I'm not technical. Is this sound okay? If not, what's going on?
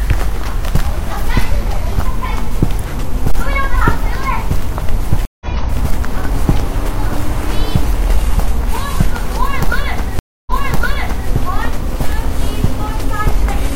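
No. Stream reconnects at 5.25 s and 10.19 s: the connection dropped, the player went briefly silent and restarted mid-stream, skipping ahead slightly at 5.25 s and repeating 0.84 s of sound at 10.19 s.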